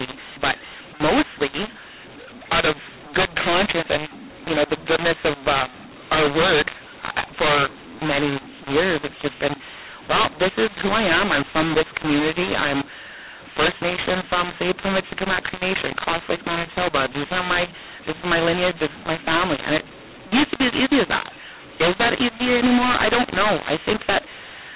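Throughout the speech, loud and quiet passages come out wrongly scaled, everything sounds harsh and gritty, and pauses fill with hiss. This is mu-law and A-law mixed up: audio coded with mu-law, which fits 8 kHz telephone coding, was decoded as A-law, scrambling every level.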